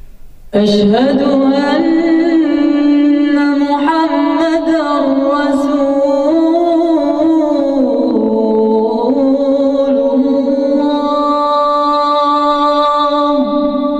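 No technical faults can be heard anywhere in the clip. Nothing in the sound points to a problem in how it was captured, carried or played back.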